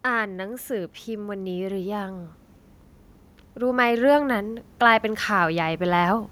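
Speech with automatic gain rising twice: from 0.05 to 2.36 s the level climbs about 5 dB, and from 3.56 to 6.27 s about 6 dB. Unlike a talker leaning closer, the background swells along with the voice, showing the gain control itself ramping up.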